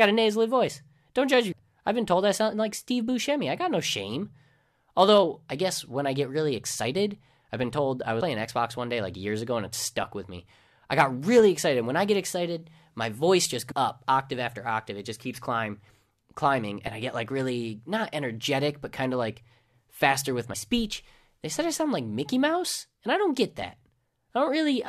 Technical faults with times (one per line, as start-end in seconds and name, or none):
1.51 damaged data in a compressed stream
13.70-13.72 damaged data in a compressed stream